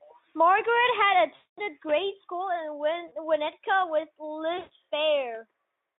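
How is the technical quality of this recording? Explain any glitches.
The speech drops out three times in this narrowband Speex call audio, which runs from about 250 Hz to 3.6 kHz. Each dropout is VoIP packet loss concealed by the speech codec.

At 1.35 to 1.61 s, 3.07 to 3.15 s and 4.57 to 4.72 s, the speech smears into a buzzy tone or coloured noise that fades. The losses last about 220, 40 and 140 ms. During each gap the decoder stretched its last pitch and filter while lowering the gain, and the speech stays weakened briefly after packets resume.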